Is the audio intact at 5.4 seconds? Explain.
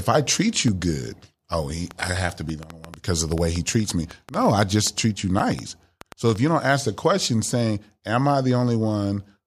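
No. At 5.39 s there is a block of digital silence lasting 5.8 ms, short enough to be heard as a single sharp tick rather than a hole. The output buffer was not filled in time, so the samples dropped to silence and came back without any fade. That abrupt edge causes the click, and the length fits one unfilled 256-sample buffer. Unlike the surrounding clicks, it is a brief gap where the signal itself is missing.

That tick falls inside a train of clicks running from 1.91 to 6.37 s. It has about thirty similar pops arriving unevenly at roughly 5.6 per second and peaking a few decibels above the speech. They ride on top of the sound and carry on through pauses. They are most likely caused by interference from nearby equipment or a faulty connection injecting pulses, not by any loss of the audio underneath.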